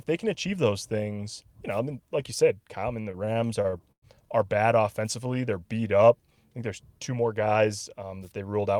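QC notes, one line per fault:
3.01–4.05 s, repeated stalls (stutter): just after "I mean", ten brief gaps where packets arrived late and the jitter buffer ran dry; the receiver stretched the last sound to cover them, about 287 ms in all, the longest 104 ms, so the speech drags and stutters with nothing lost.
5.24–6.37 s, jitter buffer slow-down: between "are bad" and "think there's two more", the receiver repeated single pitch periods to rebuild its reserve, adding about 114 ms; speech plays at roughly 91% speed, drawn out but at unchanged pitch.
8.40–8.75 s, jitter buffer speed-up: after "there's two more guys", the receiver trimmed short pitch-period pieces to shrink excess buffered delay, removing roughly 70 ms; speech runs at about 115% speed, sounding hurried while the pitch stays the same.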